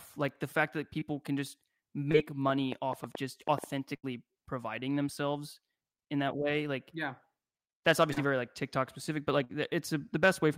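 At 0.99 s there's a short concealed packet loss: about 20 ms of the speech never arrived in time, so the receiver kept the previous sound going for a moment and blended back, leaving a tiny smear. The same happens at 2.11 s, just after "can just".

From 2.49 to 3.65 s a train of clicks ticks over everything, roughly seven pops at about six per second, unevenly spaced and peaking around 10 dB above the speech, most likely interference from nearby equipment.

At 3.96 s a burst of packet loss takes out about 80 ms. The decoder holds and fades the last sound into a brief buzz or hiss, then jumps ahead with that stretch gone.

Another short concealed loss hits at 8.13 s, right before "yeah very like", where about 40 ms is patched over and you hear a quick wobble.

Finally, at 9.44 s, just after "specific but", a second burst drops about 60 ms, with the same fading fill before the speech picks up further on.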